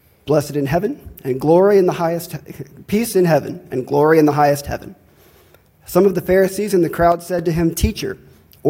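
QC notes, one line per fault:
7.12–7.39 s, sudden gain jump: a gain change of about -6 dB, likely applied without a ramp, takes effect from one sample to the next and is undone just as abruptly, so the sound and its background noise drop together for about a quarter second and then snap back.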